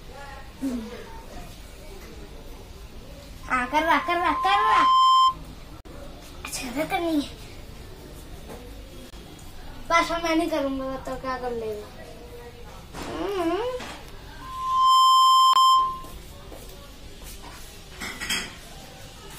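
At 3.43 s a loudspeaker feedback squeal begins: a pure 1 kHz tone swells over about a second and a half until it sits roughly 15 dB above the rest of the sound, then stops at 5.37 s. The microphone is hearing its own loudspeaker, and at 1 kHz the loop gain tops one, so that frequency keeps feeding itself. On a spectrogram it shows as a single bright horizontal line that thickens as it grows, while the waveform's envelope rises steadily.

At 5.81 s comes the first block of digital silence, a 46 ms hole. At 9.10 s there is a shorter 23 ms one. Each gap sizes fit an unfilled 2048- or 1024-sample output buffer, and the zeros start and end abruptly. The waveform drops to a near-flat line, and the spectrogram shows a blank vertical strip.

A second feedback squeal at the same 1 kHz starts at 14.41 s. This one builds much faster, in about half a second, to roughly the same level. At 15.53 s, in the middle of the squeal, another 23 ms digital-silence gap briefly cuts the tone. 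The squeal then carries on until 16.14 s.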